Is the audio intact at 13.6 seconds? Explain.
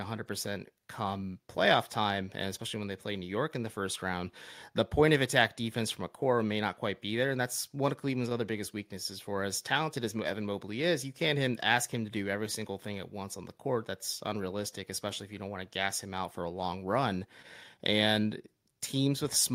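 Yes, the audio at 13.6 seconds is intact, with no audible fault at that moment.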